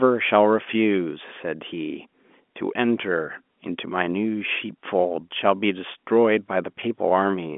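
No technical faults are audible.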